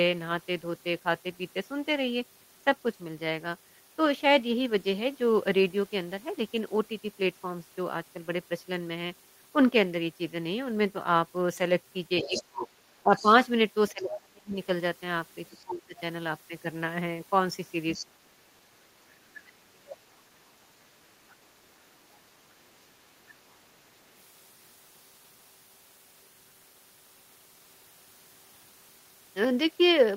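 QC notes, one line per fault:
12.2–15.49 s, other side's voice leaking through: a second voice runs under the talker at about 10 dB below the speech. The likely cause is the far end playing on a loudspeaker with the echo canceller leaving residual echo in the microphone signal.
12.23–14.56 s, speech suppressed in double talk: while the leak is present, the talker drops by up to around 30 dB in patches totalling about a second. Most likely the canceller could not separate near and far speech and attenuated both.
15.63–15.96 s, speech suppressed in double talk: a short dip of up to around 25 dB over roughly 0.3 s. The likely cause is the same suppressor clamping while both sides overlap.
17.93–18.06 s, other side's voice leaking through: a brief scrap of the far voice at about 15 dB below the speech, likely an uncancelled echo fragment.
18.09–21.05 s, speech suppressed in double talk: the longest episode. 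Level falls by up to around 35 dB, roughly two seconds in total, leaving the talker gapped. Likely heavy suppression during overlap.
21.29–21.34 s, other side's voice leaking through: a faint trace about 35 dB down, likely residual echo tail.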